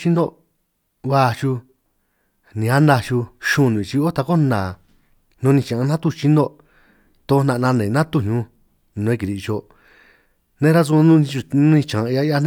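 No technical faults can be heard anywhere in the recording.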